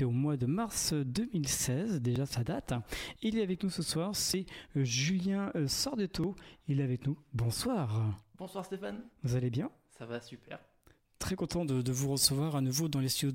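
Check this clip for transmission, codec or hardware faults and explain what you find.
One fault shows up, near the end of the clip. Pre-emphasis left on runs from 11.63 s to the end at 13.34 s. The treble was lifted along the standard FM 75 µs curve, which starts rising above about 2.1 kHz, but the matching de-emphasis cut was never applied on playback. The top end ends up about 14 dB hotter at 10 kHz than at 1 kHz, so this final stretch sounds thin, glassy and harshly sibilant.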